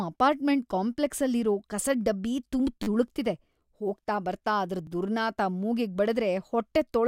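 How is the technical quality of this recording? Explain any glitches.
The speech has two repeated buffer glitches. At 2.83 to 2.87 s, one 10 ms slice plays five times in a row, giving a brief buzzy stutter. At 4.87 s, a slice repeats once, heard as a click. Each repeat joins hard, which fits a 10 ms buffer replayed when new audio arrived late. No speech seems lost.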